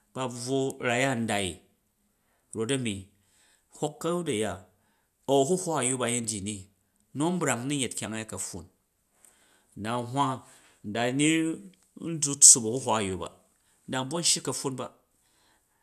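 It's a speech recording, and nothing technically wrong turns up anywhere in it, so there's no problem to pin to a time or trace to a cause.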